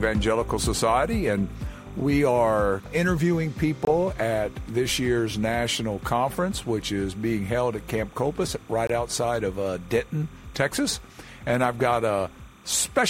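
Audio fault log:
throughout, timecode bleed: A faint, steady chirping warble sits around 30 dB below the main sound for the whole clip. Its pitch flips between roughly 1 kHz and 2 kHz, which is the two-tone square wave of linear timecode leaking in from a neighbouring track or cable. The flip pattern repeats at 30 frames per second. A hum or a whistle from a single tone would hold one pitch, but this one keeps flickering in a rhythm tied to the frame rate.
3.85–3.87 s and 8.87–8.90 s, gap between chunks: Each of these two points has a clean hole of about 23 ms. The two holes are about 5 s apart, which fits audio that was stored or played back in 5-second chunks with a little silence left at each join. Dropouts from packet loss or a glitch tend to land at irregular times and can remove material. These holes fall on a fixed 5-second grid, and the sound on either side carries on as if nothing is missing.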